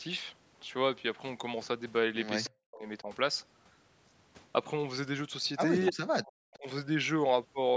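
A speech recording from a call in which, at 2.44 to 2.48 s, a faint delayed copy of the voice slips through for a brief scrap, lagging the original by about 0.3 s and sitting roughly 20 dB below it. This echo leak is likely from a far end on loudspeaker whose echo canceller did not fully remove what its microphone picked up, sending that residue back down the line.

Right after, from 2.47 to 3.08 s and again from 5.9 to 6.67 s, the voice dips sharply and breaks into pieces, falling by as much as around 40 dB for roughly half a second in the first stretch and most of the second. This is speech suppressed in double talk, likely caused by both sides talking at once so that the echo canceller could not tell its own talker from the returning echo and turned both down. The call's microphone processing, which leaves nothing above 8 kHz, is working as intended.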